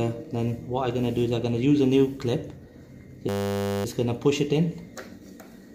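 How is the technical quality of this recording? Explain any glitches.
The recording has one clear glitch, a system hang loop from 3.29 s to 3.85 s. For about 0.56 s, a single 10 ms slice of audio repeats exactly, around 56 times, while the system appears stalled. The playback hardware keeps cycling the same short ring buffer, so the sound turns into a steady buzz at 100 Hz, the loop rate. When the loop ends, the audio resumes with little or nothing apparently missing.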